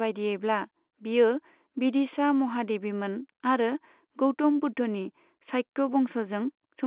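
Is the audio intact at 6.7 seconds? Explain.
Yes, at 6.7 seconds the speech is intact, heard through the normal narrow band of G.711 telephone coding with nothing above 4 kHz.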